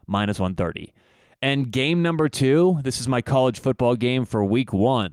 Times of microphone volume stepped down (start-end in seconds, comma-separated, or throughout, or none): none